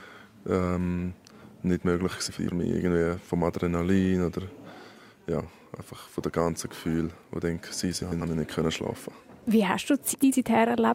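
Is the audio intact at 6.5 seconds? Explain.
Yes, the audio is intact at 6.5 seconds, with no dropout, click, distortion or other fault at that point.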